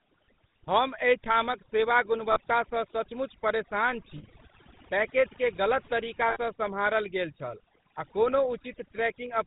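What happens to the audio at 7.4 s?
At 7.4 s the speech sounds buzzy and gravelly, with nothing above 4 kHz. This is the GSM full-rate codec, which runs throughout and whose damage is plainly audible. It rebuilds the voice from a vocal-tract model driven by regularly spaced pulses, which fits its 13 kbps rate.

The background also drops and breaks up into twinkling specks. This is overdone noise removal, also present throughout, which pulls individual frequency bands down whenever they sit close to the estimated noise.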